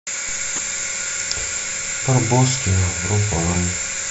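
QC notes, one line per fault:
0.56–0.72 s: DAB burbling. Noise blips in single sub-bands over the speech. Weak reception let bit errors (a low rate, around 0.2 percent) past error correction, corrupting MP2 samples so individual sub-bands carry short blips of noise.
3.39–3.56 s: DAB burbling again, the same kind of sub-band blips. The corruption spreads across slightly more MP2 frames, 9 rather than 7.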